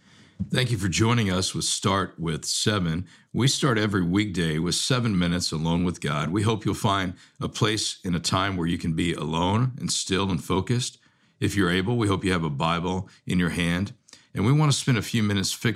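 Nothing technical stands out in this speech recording: no faults turn up anywhere along its run, so there's nothing to pin to a time or trace back to a cause.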